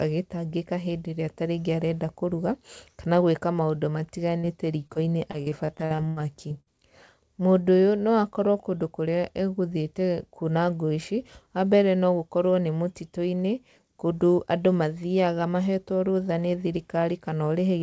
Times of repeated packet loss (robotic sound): 4.87-6.68

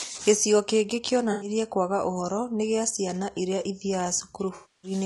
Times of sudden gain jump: none

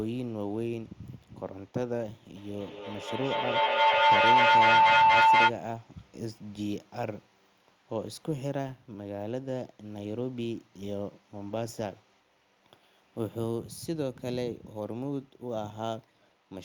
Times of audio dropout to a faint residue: none

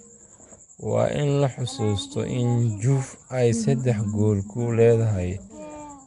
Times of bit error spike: none

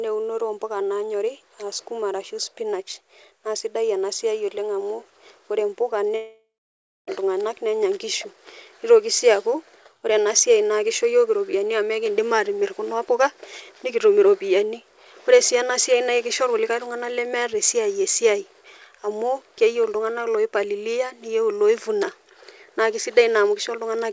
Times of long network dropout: 6.16-7.09

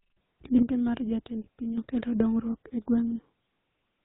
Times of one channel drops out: 0.62-1.78

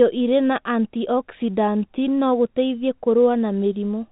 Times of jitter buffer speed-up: none

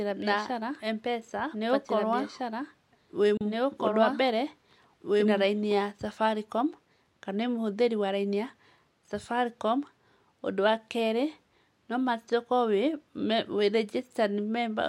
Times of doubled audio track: 0.00-5.72

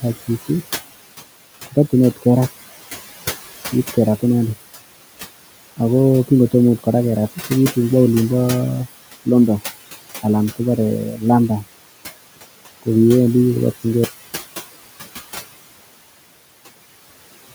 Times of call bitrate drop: none

